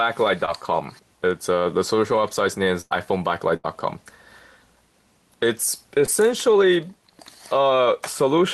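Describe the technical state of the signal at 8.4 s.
At 8.4 s the signal is intact, with nothing wrong beyond the ordinary coding character of a call path whose bandwidth tops out around 12 kHz.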